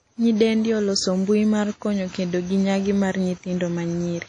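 WMA compression damage runs throughout the speech, with nothing above about 10.1 kHz and plainly audible codec artefacts from start to finish. The cause is likely a Windows Media Audio encode at a low bitrate, something like 32 kbps. The transform encoder spreads its quantisation noise across long blocks and drops weak spectral detail, so the speech takes on a ringing, washy quality, with hiss that swells and fades along with the voice.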